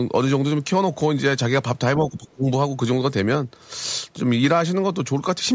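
From 1.97 to 2.46 s the speech dips sharply and breaks up, losing roughly 20 dB at its deepest over about a third of a second in all. This is likely speech suppressed in double talk: an echo canceller, hearing both ends at once, mistook the talker for loudspeaker echo and attenuated it.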